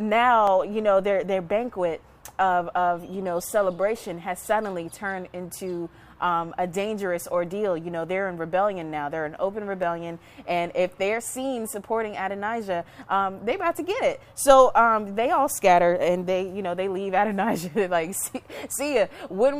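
A likely case of dropped samples, where a fraction of a millisecond went missing from the stream, makes the waveform jump abruptly to a later value. Each gap is heard as a single sharp click, at 0.47 s and again at 9.83 s.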